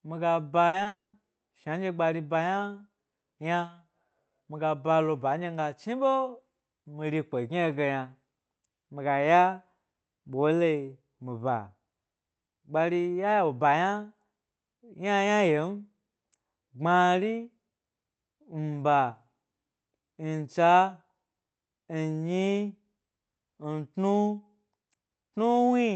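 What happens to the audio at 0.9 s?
Just before 0.9 s, from 0.83 to 0.87 s, there is a short concealed packet loss. A few hundredths of a second failed to arrive, and the receiver bridged the gap by extending the preceding sound, so it comes across as a brief smear rather than a gap.

From 0.87 to 1.15 s, covering 0.9 s, a long network dropout follows, likely caused by audio failing to arrive for about 0.28 s. The filled-in continuation fades, and then about 0.17 s of silence sits where sound should be. That audible hole, rather than a quick smear, is what sets it apart from the short loss.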